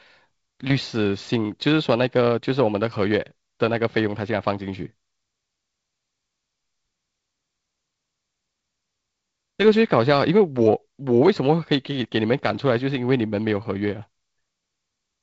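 No technical faults can be heard anywhere in this recording.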